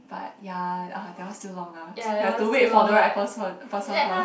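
No technical faults can be heard anywhere in this speech recording.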